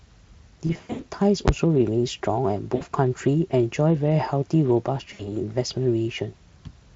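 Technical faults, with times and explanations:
0.67–1.05 s, 2.75–2.83 s and 5.13–5.32 s: VoIP packet loss concealed by the speech codec. In the first stretch, gaps totalling about 220 ms are scattered over 320 ms, the longest lasting 80 ms. The later two lose about 60 ms each. The decoder fills each gap by repeating its last pitch and spectral shape at falling gain, so the speech smears into a buzzy tone or coloured noise that fades. Because each frame builds on the previous one, the speech stays weak for a moment after packets return. On a spectrogram, harmonics run on as flat horizontal lines that dim. On the waveform, the envelope decays smoothly instead of following the syllables.
1.48 s: invalid numbers at full scale. A calculation produced infinite or invalid values, and the output was forced to the maximum level for a block of about 11 ms, which fits a 512-sample block. At that length the pop at the start and the pop at the end merge into a single sharp bang, much louder than the Speex-coded speech around it. 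On the waveform it appears as a short flat slab pinned at one extreme value, far beyond the speech peaks. On a spectrogram it is a bright vertical stripe across all frequencies.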